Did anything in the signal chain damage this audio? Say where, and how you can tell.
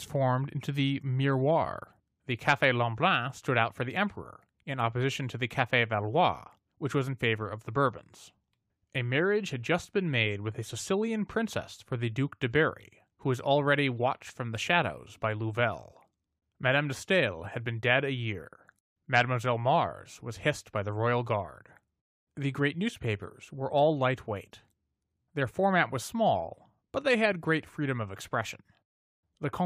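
No, no signal-chain damage heard.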